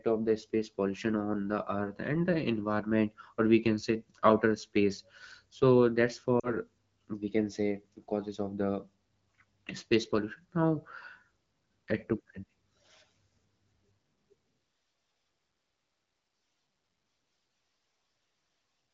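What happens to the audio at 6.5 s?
Lost AMR speech frames, from 6.39 to 6.54 s, just after "outer space so that's". About 40 ms of speech fails its error check, which fits two dropped frames, and the wideband decoder fills the gap by repeating the last good pitch and vocal tract settings at falling gain, so the sound drops to near silence within the two frames before the voice comes back weak or rough for a moment.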